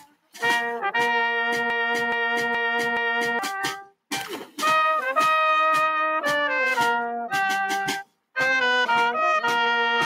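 From 0.00 to 0.36 s the sound is cut by the noise suppressor, which misreads the opening as noise and pulls it down by up to about 19 dB. The level sags and sustained parts lose body. The same dip returns at 8.04 to 8.36 s.

Between 1.70 and 3.39 s a broken-record loop replaces the audio. A 422 ms fragment plays four times back to back and the material it covers is lost. This likely comes from a stalled player or stream resending its last buffer.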